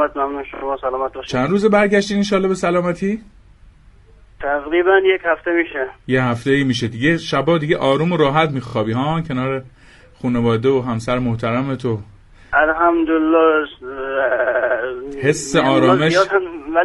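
Repeated frames occur four times, each a short block of the compressed stream replayed verbatim so the decoder sounds the same slice of audio again. At 0.54–0.62 s and 8.66–8.74 s a 26 ms block plays three extra times, adding 78 ms each. At 5.71–5.74 s it repeats once. At 14.30–14.77 s a 78 ms block loops six more times, adding 0.47 s. Each is heard as a stutter.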